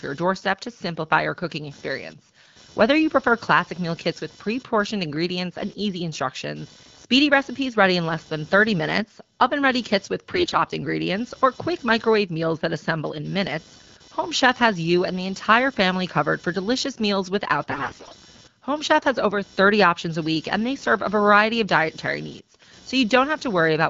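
Computer activity noise runs through the whole speech clip. Load changes in the computer shift the audio circuit's shared ground. The result is a faint buzz near 500 Hz, about 30 dB below the speech. It follows the machine's activity, not the speech.

AMR bit errors strike twice. The first is from 10.34 to 10.61 s, between "oven ready kits with" and "ingredients or quick microwave". The second is from 17.69 to 18.15 s, right after "for delicious meals without". Flipped bits in the less protected parts of the frames misplace the excitation pulses and skew pitch, gain and spectrum values. Pitch and level roughly hold, but the speech turns hoarse, scratchy and gargly.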